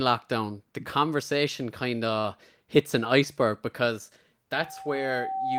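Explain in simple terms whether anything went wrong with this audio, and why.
Two things go wrong. At 2.19 to 2.26 s, after "the conversation kind", there is a short stall from a late packet. A packet arrived late, so the last sound was stretched. No speech is lost.

From 4.52 s to the end, after "hits an iceberg because", there is a loudspeaker feedback squeal. The microphone picks up its own loudspeaker, and a 773 Hz tone grows over about a second until it is roughly as loud as the speech.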